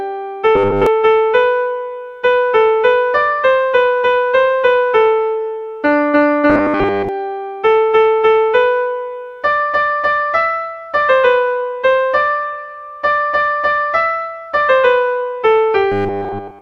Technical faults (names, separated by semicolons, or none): robotic sound from repeated short buffers